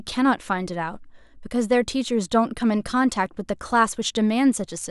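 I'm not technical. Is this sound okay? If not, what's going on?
Yes, this one's fine: nothing in the recording stands out as a technical problem, so there's nothing you need to do about it.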